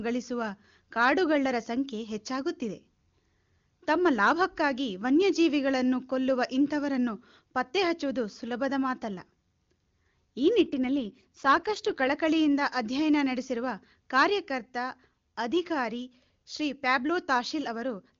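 From 10.64 to 12.12 s the speech becomes rougher and more synthetic, then returns to the cleaner HD Voice quality of the AMR wideband codec. This is an AMR rate drop. The link switches to a lower coding rate, which fits a fall from about 23.85 to 8.85 kbit/s. The 7 kHz bandwidth and the waveform envelope stay unbroken, with no gap. On a spectrogram, harmonics look blurred and grainier across that stretch.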